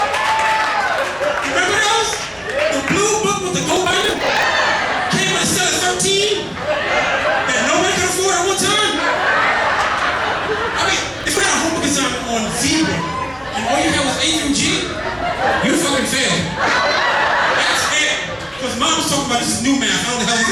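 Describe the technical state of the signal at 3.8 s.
At 3.8 s the signal is inside a burst of processor overload crackle running from 3.63 to 4.44 s. Dozens of buffers of around 10 ms miss their deadline and are skipped, leaving hard-edged gaps heard as gritty tearing. Unlike a single dropout, it is a dense run that stops once the load passes.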